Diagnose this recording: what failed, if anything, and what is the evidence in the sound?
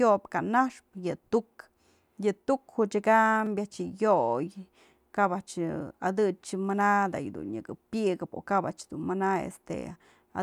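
The driver or buffer stage hiccuped once: at 3.46 s there's a brief buzzy click in the speech. That's a repeated buffer. A 5 ms chunk played three times back to back with hard joins because fresh audio arrived late, and essentially nothing was lost.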